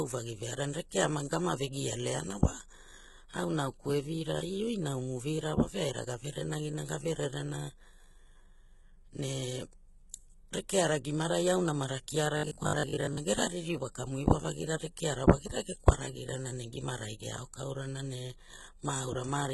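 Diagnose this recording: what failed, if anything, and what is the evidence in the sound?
Codec stage, likely HE-AAC compression, which fits a bitrate near 16 kbps: heavy damage throughout, and replicated treble sounding gritty and metallic.

Buffer stage, likely robotic sound from repeated short buffers: from 12.37 to 13.17 s, about half the audio is repeated, forcing a rigid 50 Hz buzz that fits 20 ms repeats.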